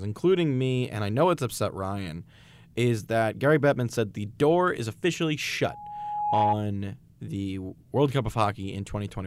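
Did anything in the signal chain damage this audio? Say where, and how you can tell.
Yes. A loudspeaker feedback squeal runs from 5.62 to 6.57 s in the analogue acoustic path, where the microphone hears its own loudspeaker. An 831 Hz tone swells over roughly 0.7 s to sit a few dB above the speech, because loop gain exceeded one at that frequency.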